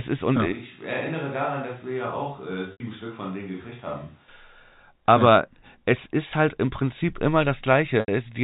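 Right after "ist und ja", at 0.52 s, the speech turns suddenly roomy and hollow, thinner in the bass and about 10 dB quieter, with room noise sitting roughly 30 dB below it. It stays that way until 4.28 s, then snaps back to the close sound. This is a switch to a distant microphone, most likely because the close microphone's signal dropped out and a farther pickup carried the recording. Throughout, the telephone band stops at 4 kHz.

From 2.72 to 2.80 s, inside the distant stretch, and again from 8.00 to 8.08 s, the speech briefly holds on a buzzy, frozen pitch that fades to silence before the speech cross-fades back in. This is packet loss with pitch repetition. About 80 ms went missing each time, which fits four 20 ms packets. The receiver looped the last pitch period to cover the gap, but the gap outlasted its fade-out of roughly 50 ms.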